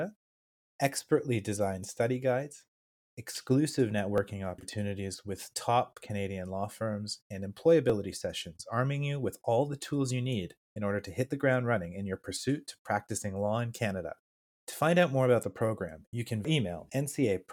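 A slight jump in the speech lands at 4.18 s, between "designed study guides exclusive" and "opportunities with top", and again at 7.90 s, after "law firms and". Each is likely a dropped buffer (overrun): a sliver of a millisecond or two was overwritten before capture, splicing the edges together.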